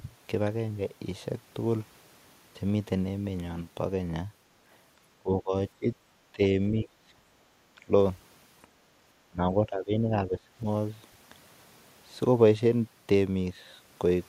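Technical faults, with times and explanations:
5.19 to 10.45 s, speech suppressed in double talk: The voice sinks sharply several times, at 5.19 to 5.53, 5.79 to 5.87, 6.32 to 6.41, 6.71 to 6.91, 7.16 to 7.22, 7.85 to 7.92 and 9.29 to 10.45 s. Most dips are brief, but the last holds for about a second. Each falls roughly 15 to 20 dB, so the talker seems to pull away or vanish in fragments. The likely cause is an echo canceller that cannot tell the near talker from loudspeaker echo while both sides speak, so it turns everything down.
7.5 s, background gated by the echo canceller: For about 70 ms the room sound drops by about 6 dB and then comes back. The loudspeaker was playing, and the echo canceller clamped the microphone hard to keep that sound from returning down the line. It let go almost at once, so the effect is a quick hole in the background.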